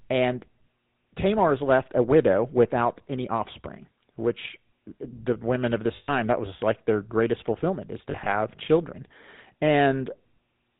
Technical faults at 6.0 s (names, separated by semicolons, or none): GSM full-rate codec; lost GSM frames